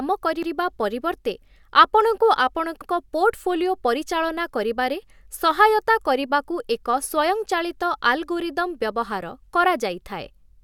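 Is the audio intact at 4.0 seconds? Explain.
Yes, the speech at 4.0 seconds plays through cleanly, with no dropout, click, distortion or other fault at that moment.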